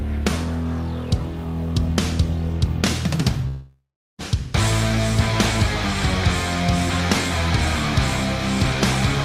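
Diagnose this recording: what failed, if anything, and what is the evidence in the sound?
At 3.47 s the sound collapses into a buzz or hiss that fades out. Then comes 390 ms of silence. Audio resumes at 4.21 s, but 720 ms is never recovered. The stage is likely the network: a long network dropout, with the receiver concealing the gap.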